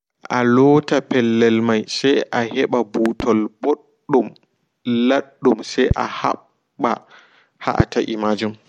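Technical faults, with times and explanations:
3.06–3.23 s, 5.91–5.94 s, 7.80–7.83 s: loud pops, two in quick succession at the first, single at the others, each about 15 dB above the speech, which continues underneath. The likely cause is a sudden voltage step or pulse from a plug, switch, static or driver glitch.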